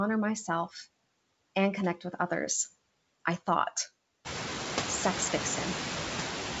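Noise suppressor artifacts run through the whole speech clip. Steady noise drops by about 12 dB between words and comes back up under them. Around 4 s the room noise climbs by about 20 dB, staying about 8 dB below the speech. A gate would instead cut cleanly to silence.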